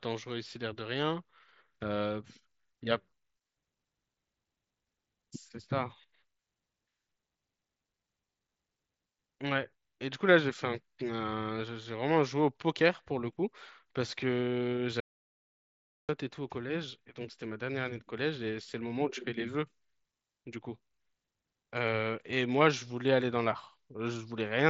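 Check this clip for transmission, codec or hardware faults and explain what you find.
There's one fault here: an audio dropout to silence from 15.00 to 16.09 s. The sound cuts dead to silence for about 1.1 s, with no room tone, then picks up mid-flow. The input was likely lost briefly while the recorder kept writing zeros. The band stops around 7.7 kHz, which fits an mSBC Bluetooth headset link.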